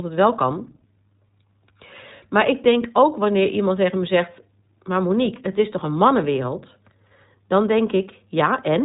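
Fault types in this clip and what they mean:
iLBC codec: narrowband speech coding that encodes each 20 ms frame's excitation independently, leaving the speech clear but plainly rough and synthetic throughout; a spectrogram shows energy stopping sharply near 3.8 kHz with nothing above, and the detail suggests roughly a 15.2 kbps setting.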